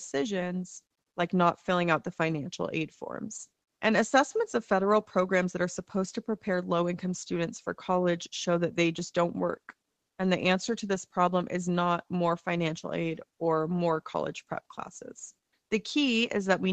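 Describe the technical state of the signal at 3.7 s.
At 3.7 s the audio is intact, with nothing beyond the ordinary band limit of a call line, where nothing reaches above about 8 kHz.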